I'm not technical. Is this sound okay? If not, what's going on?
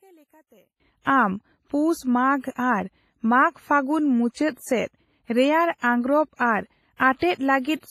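No. There are three problems.

Throughout the clip, the speech has the heavy, watery damage of WMA compression, most likely from being squeezed into a small Windows Media Audio file. This kind of encoder stores sound in chunks and throws detail away, so the voice rings and sounds washy, with a hiss that swells and fades along with the speech. Nothing is left above about 15 kHz. Unlike a simple muffled recording, this damage moves with the voice.

From the start to 0.8 s, the sound almost vanishes. This is most likely one channel inverted: the original had two channels, one of them flipped upside down, and when they were combined into one channel they cancelled each other out. Only a faint leftover remains, and the background disappears along with the voice. A mute or a dropout would leave true silence or a sudden gap, not this faint ghost.

There are two short bursts of pre-echo, from 1.02 to 1.06 s (42 ms) and from 6.96 to 7.00 s (33 ms). 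Here a little hiss arrives just before a sharp sound, and the sound itself comes out softened. The compression spreads its noise evenly over each chunk, so the quiet moment before a sudden start gets filled too. What sets it apart from an ordinary echo is that it comes before the sound instead of after it.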